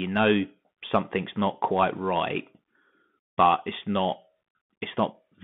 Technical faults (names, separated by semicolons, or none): Bluetooth CVSD headset codec